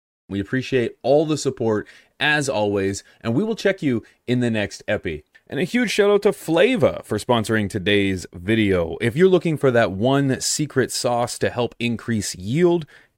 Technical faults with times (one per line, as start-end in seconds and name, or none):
none